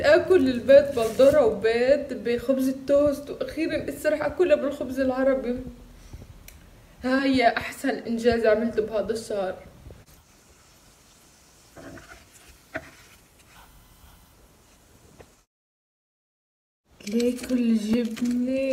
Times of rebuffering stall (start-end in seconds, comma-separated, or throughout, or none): none